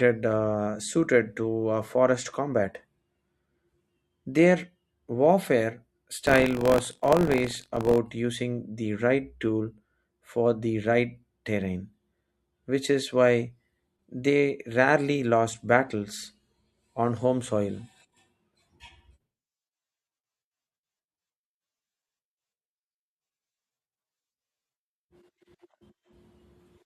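Speech, with buffer tearing from 6.23 to 7.99 s, just before "using the right tool". A steady robotic rattle at about 47 Hz, which fits a 1024-sample buffer, rides on the sound. The writer and reader of the ring buffer have slipped, so a small slice of each period replays audio from a few tens of milliseconds earlier, hard-joined at both ends. Unlike an underrun, no silent gaps occur.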